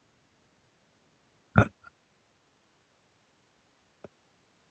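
No technical faults are audible.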